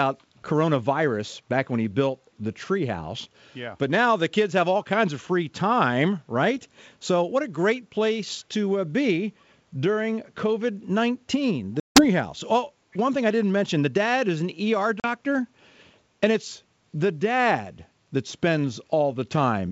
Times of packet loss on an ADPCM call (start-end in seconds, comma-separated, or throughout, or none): 11.80-12.05, 15.00-15.06